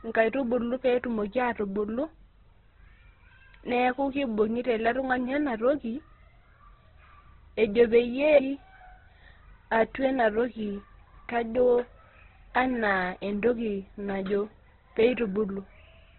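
All the way through, the speech is cut off above about 4.1 kHz and sounds rough and grainy, with the upper bands smeared into noise. That's likely heavy Opus compression in its music mode, starved of bits, which fits a bitrate of around 12 kbps.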